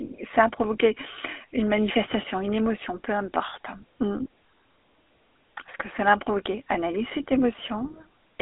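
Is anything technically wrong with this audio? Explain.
Yes. Throughout, the speech carries GSM full-rate codec damage. The codec models the vocal tract and excites it with regularly spaced pulses, which gives a plainly audible buzzy, gravelly roughness consistent with 13 kbps coding. The sound is held within a 300 Hz to 3.5 kHz telephone band, with nothing above 3.8 kHz.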